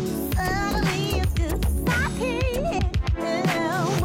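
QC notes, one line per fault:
2.74 to 2.79 s: compressed frames skipped. About half a second of audio drops out, consistent with around ten codec frames of roughly 46 ms being lost or rejected. The audio jumps ahead across the gap by the length of the missing frames.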